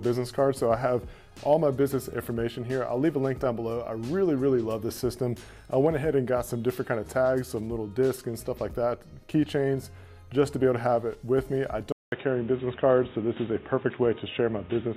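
At 11.92 s the sound drops out for about 200 ms, then returns dull and boxy through to the end, with nothing above 3.8 kHz. This is most likely an input switched to a poorer device, a narrower-band microphone or call-profile headset taking over mid-recording. The level shifts by roughly 5 dB, and a fresh noise floor appears around 30 dB below the signal. On a spectrogram, a brief blank gap precedes a hard horizontal ceiling at 3.8 kHz, and the waveform's envelope steps to a new height.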